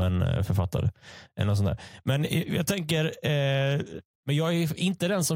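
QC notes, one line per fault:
Nothing stood out on listening to this speech clip.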